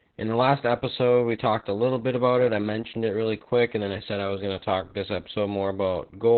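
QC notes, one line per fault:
Throughout, Opus voice compression: the speech sounds muffled and boxed-in, with a hoarse, slightly robotic edge and no brightness or sibilant detail, since nothing reaches above about 4.3 kHz. This narrowband sound points to the SILK linear-prediction coder running at a very low bitrate, around 8 kbps. At that rate it discards everything above the telephone band and codes the excitation so coarsely that the natural buzz and breath of the voice turn rough and synthetic.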